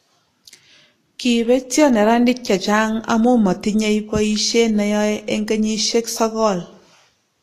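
Low-bitrate Vorbis compression is the likely cause throughout: coarsely quantised treble turns hissy and grainy, attacks blur, and nothing survives above 14.2 kHz.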